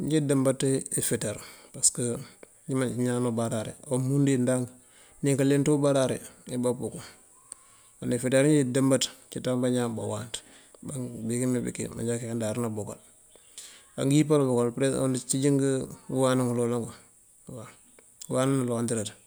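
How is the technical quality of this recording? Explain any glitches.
Nothing in the recording stood out as a technical problem on listening, so there are no glitches to explain.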